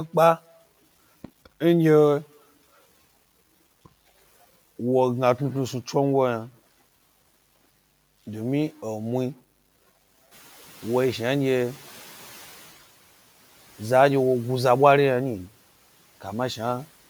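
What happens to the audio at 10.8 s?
At 10.8 s the noise suppressor is catching up. The room noise steps up by about 11 dB around 10.5 s, and the suppressor's noise estimate lags that change. From 10.31 s to 12.66 s the louder background comes through with less reduction than it should, and over roughly 2.35 s it sinks as the estimate adapts. The total cut is about 7 dB, so the background noise swells and then fades while the speech continues, with the room noise settling about 27 dB below it.

The same moment also carries the grainy, signal-following distortion of low bit depth without dither. It is present throughout the clip and is likely the result of truncation to 8 bits. The rounding error tracks the waveform, so quieter passages and the tails of speech turn gritty. The error is roughly 30 dB below the signal.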